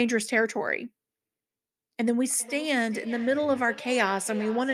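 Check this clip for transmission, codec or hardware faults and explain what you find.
There is one fault, feedback echo between two devices, running from 2.38 s to the end. The sound returns roughly every 400 ms. Two devices on the same call share a room, and each one's playback leaks into the other's microphone. Neither echo canceller removes it. The repeats sound thinner and ringing, and reach about -17 dB relative to the speech.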